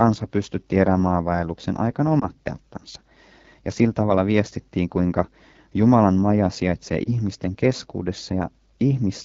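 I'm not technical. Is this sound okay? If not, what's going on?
No. The whole recording carries AMR wideband (HD Voice) codec damage. This phone codec rebuilds speech from a simplified model, and at the low quality setting this roughness suggests, the speech sounds rough and raspy throughout.

There are also two lost AMR speech frames. In each case a small piece of signal was garbled by radio errors, and the decoder briefly repeated what came before, leaving a short dip or warble: at 2.20 s, after "pystytti erämaavaelluksen aikana", and at 7.04 s, after "maja sijaitsee".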